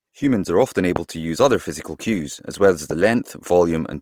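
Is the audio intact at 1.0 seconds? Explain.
No. A single loud pop sits between "are often" and "to use other physical," from 0.96 to 0.98 s, just before 1.0 s. It is most likely a voltage step or pulse added to the signal, heard as one sharp thump about 15 dB above the speech. Unlike a dropout, the speech continues uninterrupted beneath it.

Opus compression is also plainly audible through the whole clip. The speech sounds grainy and rough rather than swirly or hollow as MP3 would, because the codec fills starved bands with folded or noise-like content, which fits a fullband music-mode encode at about 24 kbps.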